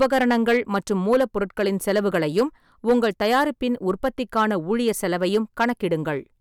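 Hard clipping runs through the whole speech clip. The signal was driven about 8 dB past what one stage could pass, so every peak was cut flat. Only a small share of samples, around one or two percent, hit the ceiling, which is why it shows up as crackle on loud syllables, not a constant fuzz. Unlike soft saturation, which rounds peaks into a warm thickening, these flat tops add sharp high harmonics that sound gritty and abrupt.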